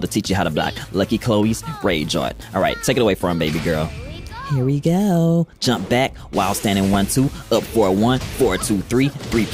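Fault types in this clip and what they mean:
loud pop: A sudden voltage pulse, likely from a plug, a switch, static or a driver glitch, lands on the signal and is shaped by the circuits after it, giving a single sharp pop at 6.94 s, roughly 10 dB above the surrounding sound, which carries on underneath.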